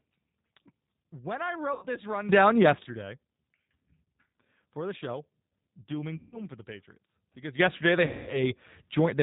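Throughout, the speech carries G.729 codec damage that is plainly audible: a rough, slightly synthetic texture typical of 8 kbit/s G.729A coding, where a vocal tract filter, pitch predictor and sparse pulses rebuild each frame. A spectrogram shows an empty band above 4 kHz.

VoIP packet loss concealed by the speech codec appears at 1.73 to 1.87 s, 4.04 to 4.08 s, 6.17 to 6.41 s and 8.06 to 8.52 s. The gaps span about 90, 30, 150 and 210 ms, which fits three, one, five and seven lost packets. Each gap is filled by the decoder stretching the last sound it had and fading it out. On a spectrogram these show as smeared, stretched sound. In the waveform they are decaying stretches, with weak, distorted speech just after each one.

A sudden gain jump of about 13 dB runs from 2.29 to 2.83 s, and another of about 12 dB from 7.59 s to the end. In both, the speech and the background noise step up together, likely from a gain setting applied without a ramp. 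The waveform envelope shows an abrupt vertical step at each jump.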